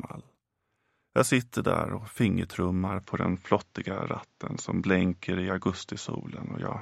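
At 3.01 s the sound abruptly turns duller and stays that way to the end, with nothing left above 7.6 kHz. There's no gap and no real level jump, just a faint new noise floor well below the signal. That's most likely the input switched to a poorer device.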